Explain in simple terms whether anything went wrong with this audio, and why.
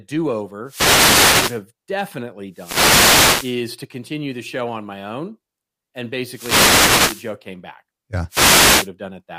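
Wireless microphone noise hits break into this speech four times: from 0.64 to 1.63 s, 2.51 to 3.63 s, 6.25 to 7.34 s, and 8.28 to 8.90 s. Each sounds like a brief swish or burst of static over the voice. The microphone sends its sound by radio, and when reflected copies of that signal cancel each other out, the signal fades. The receiver's own hiss then rises and can crackle into clicks, masking the speech until the signal recovers.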